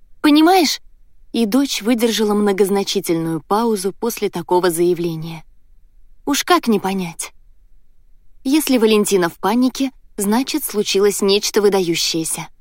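No technical faults are audible.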